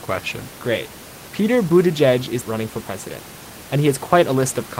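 No technical faults can be heard anywhere in the recording. Some room noise sits beneath the speech, at about 18 dB below it in one layer and about 38 dB below it in another, and that is part of the recording space rather than the system.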